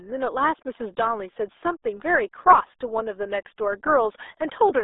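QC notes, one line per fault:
Throughout: RealAudio 14.4 codec. The speech is confined to a telephone-like band of roughly 300 Hz to 3.7 kHz, with nothing above 3.8 kHz. Heavy low-rate coding leaves it muffled and gargly, which fits an 8 kbit/s dial-up-era speech codec.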